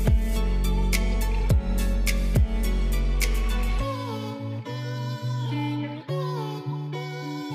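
At 1.16 s a corrupt frame was decoded: bits inside one compressed frame were flipped in transit or storage, and the decoder played that frame anyway instead of concealing it. The damaged data misread gains and spectral codes, so energy landed at the wrong frequencies for roughly a single frame's duration. The result is a brief, isolated blip, a short squeak or burst of noise that is gone almost at once.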